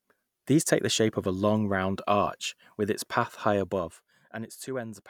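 Nothing in this speech clip stands out as a technical fault; it's all in order as far as the ear can tell.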